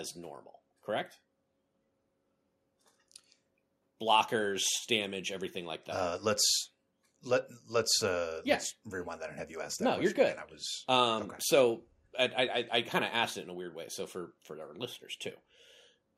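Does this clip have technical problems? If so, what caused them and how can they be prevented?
No, the speech signal in this clip shows no technical problems, so there is nothing here that needs preventing.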